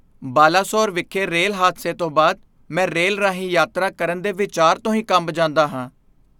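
Nothing technical goes wrong anywhere in this speech recording, so there's no fault to point to at any moment.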